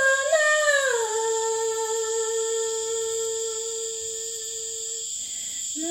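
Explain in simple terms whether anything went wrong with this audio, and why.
Nothing went wrong here: there are no dropouts, glitches or other problems to point to anywhere in it.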